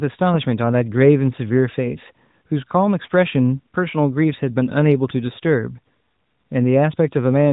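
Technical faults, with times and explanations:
No technical faults detected.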